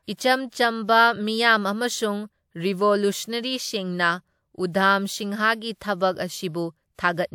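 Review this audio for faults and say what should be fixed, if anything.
The transform codec spread its block's quantisation noise ahead of sharp attacks in this speech, causing pre-echo at 0.48–0.52 s, 4.71–4.74 s and 6.95–6.99 s. Each onset is preceded by roughly 30 to 40 ms of hiss and sounds smeared. Enabling block switching to short windows on transients, or using a higher bitrate, would prevent it.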